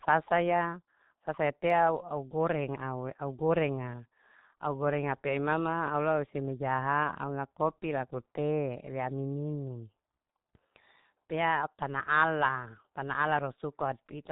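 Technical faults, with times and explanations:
Throughout: G.723.1 codec. The speech has the heavy, narrow sound of early internet telephony. Nothing survives above 4 kHz, so the speech is muffled and sibilants lose their edge. The coder describes the voice with a model refreshed only every 30 ms frame. That slow updating smears fast transitions, blurring consonants and leaving a hoarse quality on voiced sounds. The damage is heavy, which fits a bitrate of about 6.3 kbit/s.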